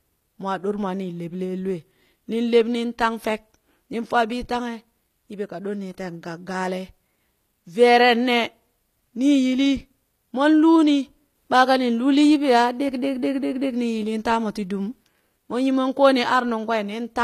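Throughout, sibilants sound gritty and metallic, with treble that stays bright but stops near 14.9 kHz, likely HE-AAC compression at a low rate near 24 kbps, rebuilt rather than simply muffled.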